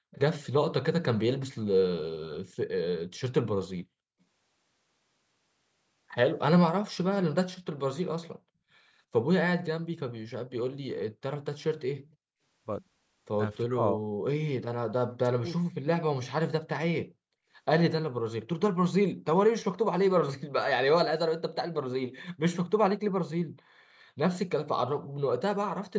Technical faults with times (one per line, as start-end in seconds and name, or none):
0.12-0.19 echo leak
12.06-12.16 echo leak
13.63-14.05 speech suppressed in double talk
15.01-15.86 speech suppressed in double talk